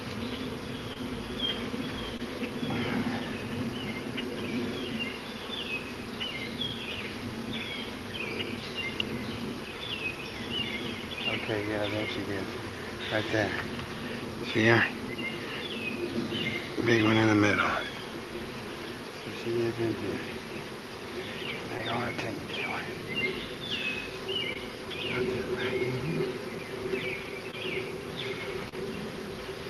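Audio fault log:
0.93, 2.17, 21.77, 24.53, 27.51 and 28.69 s: short concealed packet loss. About 20 ms of audio failed to arrive each time, which fits a single lost 20 ms packet on this Opus call path. The decoder bridged each hole by extending the preceding sound and then cross-fading back, so each spot is a brief smear or wobble of roughly 40 ms, slightly longer at 28.69 s. Unlike a plain dropout, there is no silent gap, only a momentary blur.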